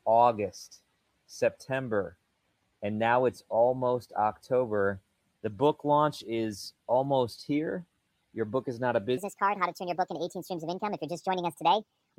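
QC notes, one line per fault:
9.17–12.17 s, wrong sample rate: The sound suddenly runs 1.5 times too fast and jumps about 7 semitones higher. Speed and pitch shift together. Nothing converts the rate, so samples are clocked out too quickly. This fits 32 kHz material being played at 48 kHz.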